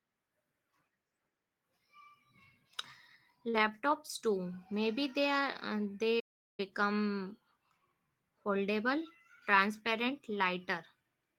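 At 3.49 s to 3.55 s there is a short concealed packet loss: about 40 ms of the speech stream arrived too late or not at all, and the decoder bridged the hole with roughly 39 ms of synthesized continuation before blending back into the real signal. It registers as a quick smear or wobble.

From 6.19 s to 6.60 s the audio drops out in a playback stall lasting about 386 ms. The speech halts abruptly mid-flow, leaving a clear gap of silence before resuming. The likely cause is the player's buffer running dry or its output thread being blocked, so no samples reached the output until it recovered. The waveform shows a flat line across that span, and the spectrogram shows a blank vertical band with hard edges on both sides.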